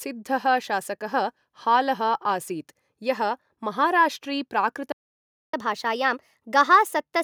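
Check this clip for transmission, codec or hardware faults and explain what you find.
Two related faults show up, both near the end of the speech. At 4.92 s there's a playback stall: the sound cuts out mid-flow and the output sits silent for about 0.61 s, until 5.54 s. That gap most likely comes from the player running dry of buffered data or having its playback thread held up, so nothing reached the output until it recovered.

Right after, from 5.54 s to the end, there's catch-up at higher speed. The player works through its backlog by resampling, running at 1.15 times normal speed, and pitch rises with it by roughly two semitones. The speech sounds hurried and slightly chipmunk-like for that last stretch. It's the player trying to close the time it lost during the dropout, and it's still sped up when the clip ends.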